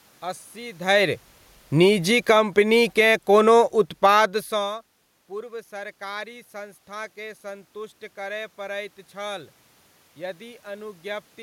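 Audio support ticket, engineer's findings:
Automatic gain falling, 1.65 to 4.83 s. Level and room noise sink together, about 7 dB. AGC judged input too loud or its noise too strong and pulled gain down gradually.

Automatic gain rising, 4.14 to 4.54 s. Input dropped about 21 dB as talker moved back. AGC pushed gain up about 4 dB, lifting voice and background together.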